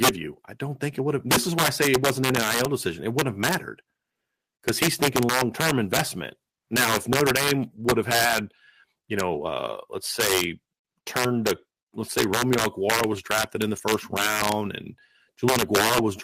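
Throughout the speech, integer overflow: peaks driven about 10 dB past full scale wrap to the opposite sign, so roughly one percent of samples produce violent cracks.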